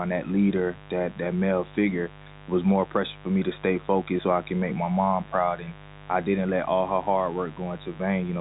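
Interference from a switching source such as a dimmer or rectifier, or from a missing cable shield, is getting into the signal path of this speech recording. The result is mains buzz present throughout. The spikes arrive twice per 50 Hz cycle, so the fault shows up as a harsh, raspy buzz built from 50 Hz harmonics reaching well up the spectrum, sitting only about 20 dB below the speech. On top of that, the G.711 telephone coding cuts everything above roughly 3.8 kHz, giving the familiar narrowband phone sound.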